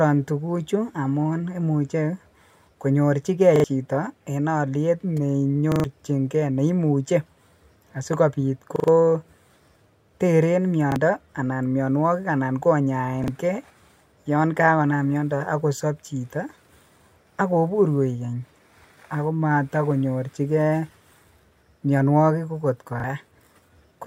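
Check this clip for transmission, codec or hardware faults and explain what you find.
The speech stutters six times, each a repeated buffer fault. At 3.56–3.64 s and 5.72–5.84 s, then 8.76–8.88 s, 10.92–10.96 s, 13.24–13.28 s and 23.00–23.04 s, a tiny slice of speech sounds again and again with a hard edge at each restart. The slice's length fits a 40 ms buffer. It repeats twice at 3.56 s, three times at 5.72 s and 8.76 s, and once at each later point. New audio arrived late, so the device replayed its last buffer. Up to about a tenth of a second of the real speech goes missing at each stutter.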